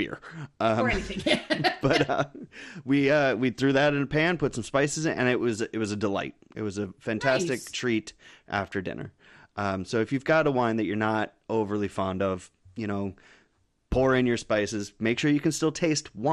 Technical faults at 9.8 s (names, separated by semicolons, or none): MP2 compression